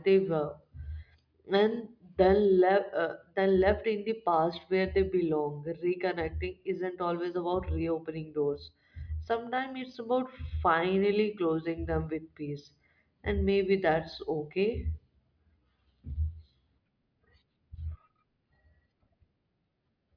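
No technical faults detected.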